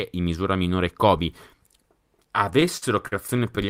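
Speech with repeated stalls (stutter) from 2.53 to 3.59 s: ten brief holds, the longest about 49 ms, together filling 174 ms, roughly a sixth of that stretch. Late packets repeatedly emptied the jitter buffer, and the receiver extended prior sound until data resumed. Nothing is lost, but delivery drags.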